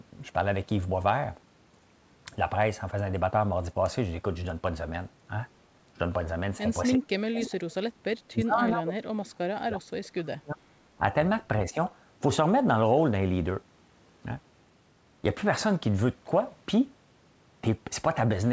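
From 6.97 to 10.59 s the speech is repeatedly pushed down, about 35 dB at its deepest and roughly three seconds in total. This is likely speech suppressed in double talk: the echo canceller confused overlapping far-end audio with its own talker and attenuated both.

Inside that stretch, at 7.41 to 7.49 s, a brief echo leak appears as a short scrap of the voice returning about 356 ms late, roughly 10 dB below the direct speech. The loudspeaker side's canceller likely failed to remove it.

A second, much smaller likely double-talk suppression follows at 11.70 to 11.77 s, a 70 ms dip of about 10 dB. It is a quick duck in level rather than a dropout, within audio already band-limited at 8 kHz by the call path.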